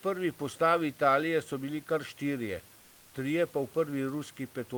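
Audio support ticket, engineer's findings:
Comfort noise in place of the background, 2.79–3.13 s, after "so bili kar štirje". Room noise drops to flat, featureless hiss, about 2 dB quieter. Likely Opus DTX filling a 340 ms pause.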